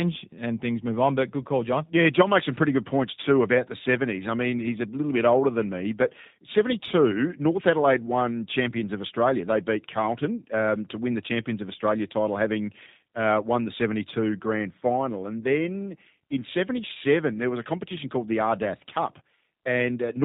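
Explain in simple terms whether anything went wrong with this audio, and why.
Yes. The speech passed through the G.729 codec, a phone-call compressor that rebuilds the voice from a rough model instead of sending the sound itself. From start to finish, everything above 4 kHz is gone, and the voice sounds dull, rough and slightly synthetic.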